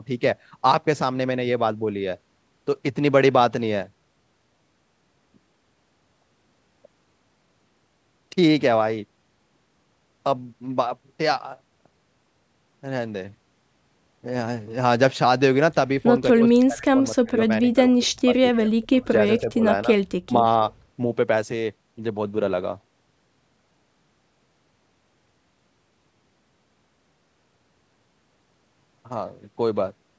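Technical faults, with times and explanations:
16.33 to 19.64 s and 20.26 to 20.45 s, speech suppressed in double talk: the speech dips sharply and breaks into fragments. In the first span, roughly two seconds in total are pulled down by as much as about 30 dB. In the second, a brief dip of around a tenth of a second falls by about 25 dB. The likely cause is an echo canceller that could not tell the near talker from loudspeaker echo while both sides spoke, so it attenuated everything.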